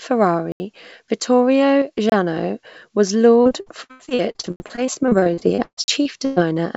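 At 0.52 s there's a block of digital silence: the sound cuts out for 80 ms and comes back at 0.60 s, with no fade. Most likely the output buffer just wasn't filled in time.

From 1.82 to 1.98 s the level suddenly sags by about 6 dB and then recovers. That abrupt step is what you get when one channel drops out and the mono sum loses half its contribution, so that's the likely cause here.

Right after that, from 2.10 to 2.12 s, there's another block of digital silence, only about 25 ms long.

From 3.42 s to 6.43 s the sound turns choppy, with pieces missing. That's repeated packet loss: around thirty holes, the longest about 135 ms, each patched by stretching the last bit of sound, so roughly a third of that stretch is filler rather than real audio. Two more hard blocks of digital silence sit inside it, at 4.56 to 4.60 s and 5.84 to 5.88 s, 40 ms each, with the same abrupt edges. Underneath all of this the call path's codec limits the band, with nothing above 8 kHz.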